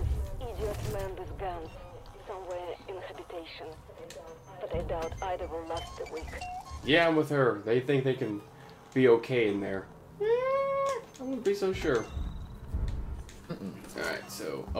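Compressed frames skipped: the decoder never played a few whole frames, either missing from the file or rejected as damaged, so the audio jumps ahead. At 10.88 s roughly 70 ms vanishes, pointing to about four frames, and at 13.49 s about 50 ms, likely a couple of frames.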